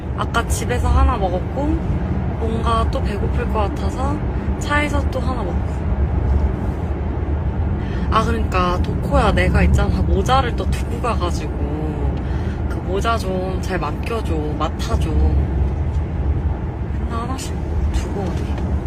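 At 7.79 to 7.81 s there is a skip ahead. Roughly 0.7 s of audio never reaches the output, either lost in transit or discarded by the jitter buffer while later audio was already queued. No concealment fills the gap, so the material on either side is butted together almost directly. Playback lurches forward with an abrupt discontinuity, and the delay drops by about the same 0.7 s.

From 9.67 to 10.50 s the jitter buffer speeds up playback. The buffer was holding more audio than its target depth, so the receiver trims short segments of one or a few pitch periods in quick succession to bring latency down. Around 50 ms is removed in total, and the audio runs at about 104% speed at unchanged pitch. The timing is compressed over that stretch.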